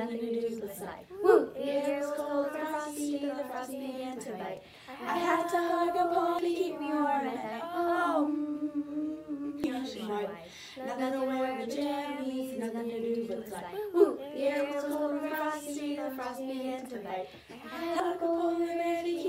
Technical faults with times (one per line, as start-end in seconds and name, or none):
6.39 damaged data in a compressed stream
9.64 damaged data in a compressed stream
18.00 damaged data in a compressed stream